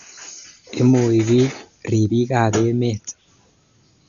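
From start to finish the speech is band-limited, with nothing above about 7 kHz, and sounds dull. A rough, fluttering noise hangs around the tonal parts of the voice. The likely cause is heavy Dolby Digital compression at a low bitrate, around 48 kbps. Starved of bits, the encoder narrowed the band and left many frequency lines without mantissa data, which the decoder filled with dither noise.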